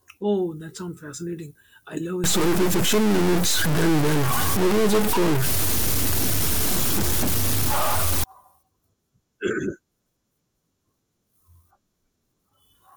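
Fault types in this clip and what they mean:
Stuck bit: from about 2.24 s to 8.24 s the speech turns harsh and buzzy, and the gaps between phrases fill with a steady hiss instead of silence. The likely cause is one data bit held at a fixed value, so roughly half the samples jump by a step of about -15 dBFS. On a waveform the trace shows offset plateaus and squared edges. A spectrogram shows broadband energy spread across all frequencies, even during pauses.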